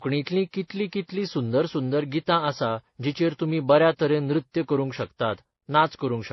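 From start to finish the speech sounds dull and smeared, with nothing above 5.8 kHz and a mix of swirly, warbling and gritty artefacts stacked together. This likely points to transcoding between lossy codecs: a low-bitrate MP3, then AAC, then MP3 again, each compounding the previous damage.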